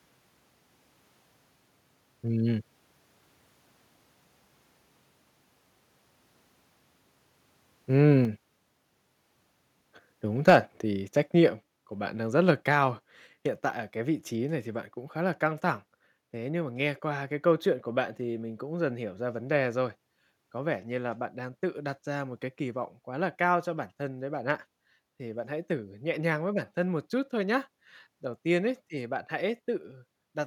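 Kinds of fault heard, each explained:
Microphone overload: From 10.47 to 10.57 s the loudest sound turns harsh and crackly, with about 7% of the samples flattened where the signal is driven about 6 dB past the converter's limit. The likely cause is an input volume set too high, driving peaks into the converter's limit.
Microphone volume stepped down: Speech and background drop suddenly in level at 8.25 s, 10.5 s and 11.49 s, by about 4, 3 and 4 dB. This is likely the call software lowering the device's input volume in single steps, the 10.5 s one landing inside the distorted peak.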